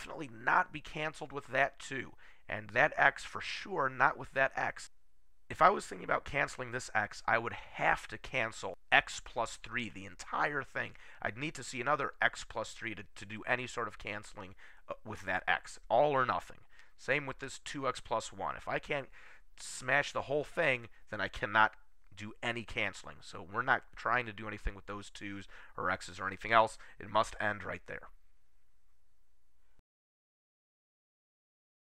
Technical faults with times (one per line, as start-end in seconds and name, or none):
none